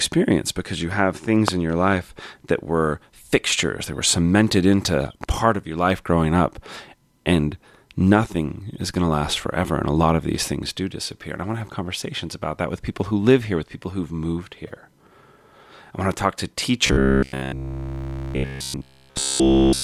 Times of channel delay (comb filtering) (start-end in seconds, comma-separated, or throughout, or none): none